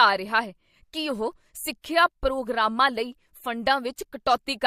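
Pre-echo appears at 1.82 to 1.84 s and again at 3.96 s: the codec's quantisation noise, spread across a roughly 36 ms block, leaks ahead of sharp speech attacks, giving a brief hiss about 18 dB and 14 dB up that softens each onset, which fits a codec never switching to short blocks.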